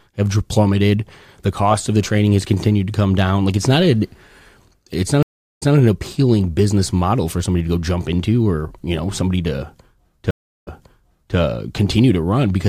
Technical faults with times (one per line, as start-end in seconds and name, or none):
5.23-5.76 stream reconnect
10.31-11.37 stream reconnect